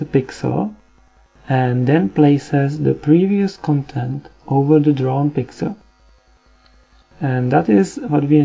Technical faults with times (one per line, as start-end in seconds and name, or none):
none